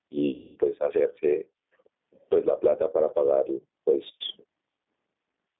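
Gain pumping runs through the whole clip: the level is pulled down on each loud sound, swinging by around 20 dB. The likely cause is a microphone gain set far too high, with a fast limiter clamping down on each peak, so the level sounds squashed.

G.729 codec coding is also present throughout. The speech is confined to roughly 200 Hz to 3.6 kHz, and it has the plainly rough, synthetic texture of a low-rate model of the voice's filter and pitch, which fits an 8 kbit/s codec.

VoIP packet loss concealed by the speech codec occurs from 0.34 to 0.58 s, about 220 ms. The decoder repeats its last pitch and filter at falling gain, so the sound smears into a fading buzzy tone or coloured noise, and the voice stays weak for a moment after the signal resumes.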